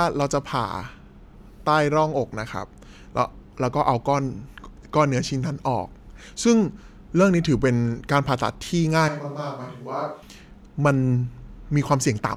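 From 9.09 s to 10.22 s the speech turns roomy and hollow. It loses bass, drops roughly 10 dB and sits over more room noise. The change in and back is abrupt. This points to a likely switch to a distant microphone after the close one dropped out.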